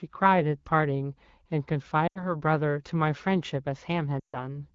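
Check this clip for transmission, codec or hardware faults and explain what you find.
Two dropouts where AMR speech frames went missing in transmission. The wideband coding sounds like a mid-rate setting, only lightly coloured.

Lost AMR speech frames, at 2.07 to 2.35 s and 4.20 to 4.38 s: corrupted frames were thrown out, and the decoder filled in by repeating the last good pitch and vocal tract settings while turning the gain down. You hear the speech smear and sag briefly, about 80 ms of lost audio in the first gap and 140 ms in the second, which fits runs of 20 ms frames. Since it's wideband, the fade kicks in quickly, then the voice returns a bit thin and rough.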